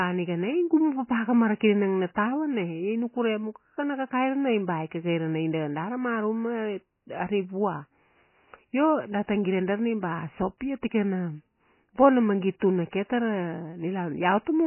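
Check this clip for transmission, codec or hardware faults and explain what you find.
Two codec faults are audible: heavy lossy-compression damage across the whole recording, and one pre-echo event near the end.

MP3 compression: The speech is band-limited throughout, with nothing above 3 kHz, and sounds watery and swirly. This is likely MP3 coding at a very starved bitrate, consistent with roughly 16 kbps. With so few bits, the encoder discards the upper band entirely and drops weak spectral lines that flicker between frames. Sibilants lose their bite and turn smeary, and the voice takes on a muffled, phasey texture.

Pre-echo: At 12.60 to 12.62 s, between "bona magit" and "tuna ke", a brief hiss of about 20 ms arrives just ahead of a sharp onset. The transform block containing that attack spreads its quantisation noise evenly across its full length, so noise sized for the loud moment also covers the quiet instant before it. 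The onset itself sounds softened and smeared instead of crisp.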